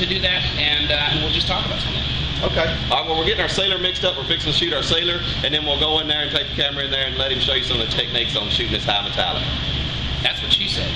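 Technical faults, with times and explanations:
Nothing here stands out as a technical problem; the audio just runs along without a hitch.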